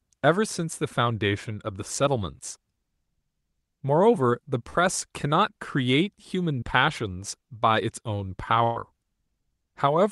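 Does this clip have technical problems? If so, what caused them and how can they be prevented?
Yes. A burst of packet loss occurs at 4.69 to 4.81 s and at 8.64 to 8.78 s. The receiver stretched the last sound and faded it, then jumped ahead, skipping about 40 ms and 120 ms. Forward error correction, redundancy and a steadier network connection would prevent these bursts.

A short concealed packet loss at 6.60 s lasts about 20 ms. It is heard as a brief smear. Unlike the bursts, there is no fade or audible jump. Reducing jitter, or giving the jitter buffer slightly more headroom, would help avoid these small losses.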